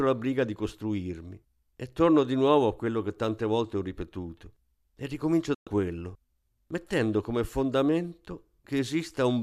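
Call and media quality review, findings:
Digital broadcast dropout, 5.54–5.67 s. Speech fades to silence within 3 ms and resumes at "quello mettendo come". The receiver muted on lost or checksum-failed frames. The 120 ms of missing audio fits about five frames and is unrecoverable.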